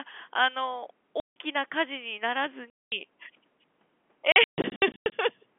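Packet loss filled with silence cuts this narrowband telephone speech three times. At 1.2 s, 160 ms drops out. At 2.7 s, a 220 ms hole follows. From 4.32 to 5.12 s, about 420 ms is lost in scattered bursts, the longest 140 ms. Missing packets were replaced by dead silence. The gap lengths fit 20 ms packets. Each hole starts and stops abruptly, so the speech sounds chopped.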